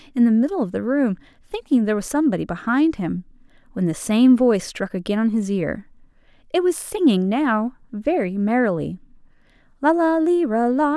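Listening to this speech recording, nothing technical stood out as wrong at any point.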